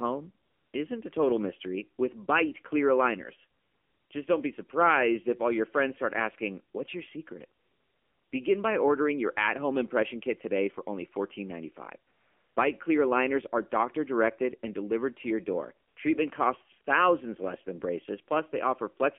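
The whole clip carries AMR narrowband mobile codec damage. Speech is held between 250 Hz and 3.4 kHz. Nothing above 4 kHz survives. The voice sounds buzzy and synthetic, which fits a low AMR-NB rate near 7.4 kbps. Few bits leave a coarse vocal-tract model.

AMR comfort noise fills five pauses: 0.46 to 0.74 s, 3.60 to 4.10 s, 7.60 to 8.32 s, 12.12 to 12.56 s, and 15.88 to 15.96 s. Speech frames stopped. Smooth synthetic hiss replaces the real background and switches in and out.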